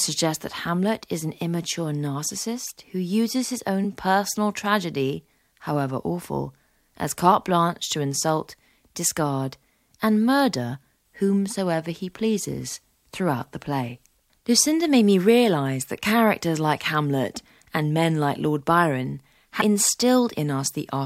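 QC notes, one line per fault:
3.83 s and 19.60–19.62 s: damaged data in a compressed stream. Quick blips, the first right between "narcissist who uses his" and "personal tragedy however awful". Corrupted bytes knock the decoder out of sync, so it spits garbage and skips ahead to the next good frame.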